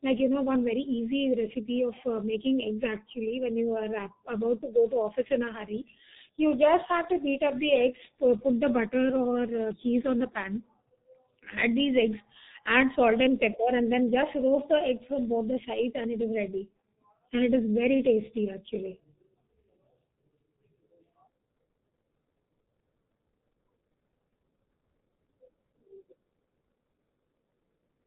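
From the first second to the last, the speech carries heavy G.723.1 codec damage. The band stops dead at about 3.8 kHz, so everything sounds muffled, with no air or sparkle on top. The coder chops the signal into 30 ms frames and rebuilds the voice from a coarse model that updates slowly, so consonants smear together and the tone turns hoarse and buzzy. It's the thin, strained sound that points to a stream around 6.3 kbit/s.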